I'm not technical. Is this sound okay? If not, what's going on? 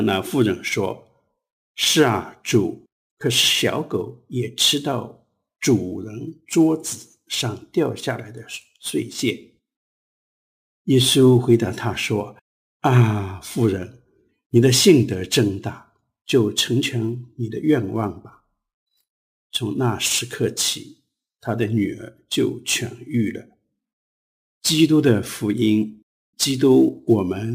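No, not quite. All the way through, there's a hiss or grittiness riding on the sound, and it gets stronger whenever things turn loud or bright, then disappears in the quiet gaps. That's sample clock jitter: the timing clock in the recording gear wobbles, by something like a few millionths of a second, so each snapshot of the sound lands slightly early or late. Fast-changing, high-pitched parts suffer most, which is why the roughness follows them.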